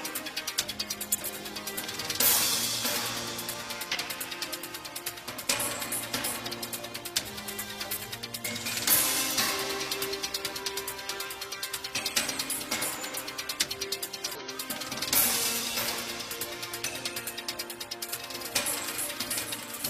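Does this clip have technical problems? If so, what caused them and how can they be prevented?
Yes. Compressed frames skipped at 1.12, 3.90, 6.46, 9.34, 12.22, 13.15 and 14.26 s: missing or rejected frames make the audio jump ahead by roughly 50 to 200 ms each time. Prevent this with checksummed storage and reliable transport, so frames arrive intact.

Doubled audio track from 18.08 s to the end: a second full-band copy, about 10 dB quieter, enters abruptly and trails by roughly 0.7 s. The likely cause is a slower second capture path or an edit holding two offset copies. Prevent this by routing the source only once and checking edits for overlapping duplicates.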